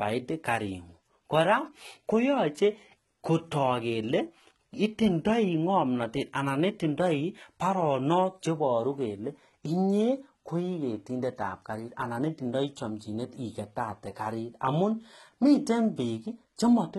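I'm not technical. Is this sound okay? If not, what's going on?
No. Throughout the whole recording the s sounds have a gritty, metallic edge and come out lispy rather than crisp. Nothing at all is heard above about 12 kHz. This is most likely HE-AAC compression applied heavily: the encoder keeps only the lower part of the sound and fakes the treble by copying lower tones upward, so the brightness is there but it doesn't match the real voice.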